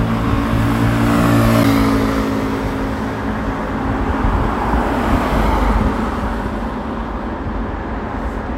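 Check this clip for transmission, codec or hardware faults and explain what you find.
One fault found. At 1.63 s a CD skip occurs: the laser jumps to another spiral turn, so a tick and a brief mute of a few milliseconds precede the sound resuming elsewhere.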